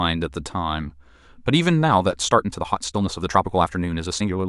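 At 2.26 s the speech abruptly hurries up and stays that way to the end of the clip at 4.49 s. This is a time-stretched section, with the audio squeezed to about 1.46 times its original pace while its pitch holds steady, likely because software dropped short slices to shorten it. It sounds rushed. On a spectrogram the harmonic spacing stays unchanged while syllables crowd together, and the waveform shows tighter envelopes with small seams where pieces were removed.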